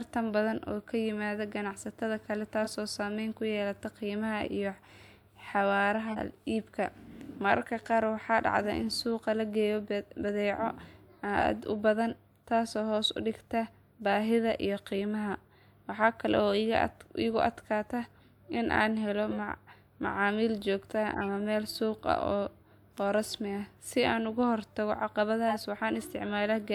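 Corrupt frame decoded at 2.63–2.73, 6.08–6.19, 19.31–19.36, 21.12–21.26 and 25.48–25.57 s. Damaged compressed frames were decoded anyway, throwing energy into the wrong frequencies, so the speech breaks into brief chirpy noise bursts around -25 dBFS, slightly louder near 25.5 s.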